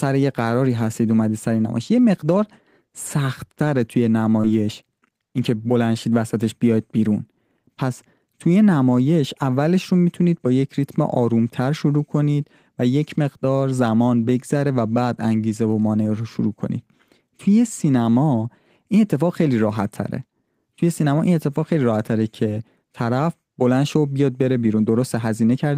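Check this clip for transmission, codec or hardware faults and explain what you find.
One transmission fault is audible. At 4.41–4.45 s, short concealed packet loss: 20 ms of missing audio is filled by extending the preceding sound, leaving a brief smear rather than the silent gap of a dropout.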